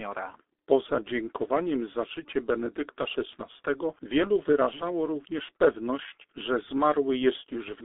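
Throughout the clip, the speech has passed through the G.723.1 codec at a very low rate, consistent with about 6 kbit/s, confined to roughly 300 Hz to 3.6 kHz with nothing above 3.7 kHz. The heavy coding leaves it muffled and hoarse, with smeared consonants.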